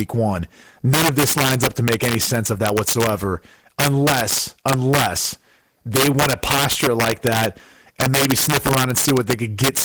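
A gain stage in the speech path overflowed its integer range throughout the recording instead of being limited. It was driven about 7 dB past full scale, so each peak that crosses the limit wraps around to the opposite sign. Only a small share of samples, around one or two percent, go over. Because of that integer overflow, the louder syllables carry violent, harsh cracks, far sharper than ordinary clipping, riding over the lightly coded fullband Opus signal.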